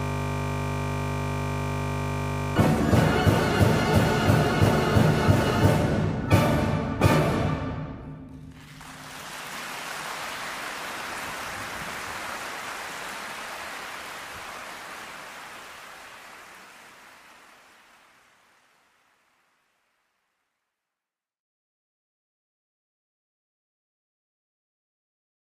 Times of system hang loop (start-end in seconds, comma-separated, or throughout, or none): 0.00-2.56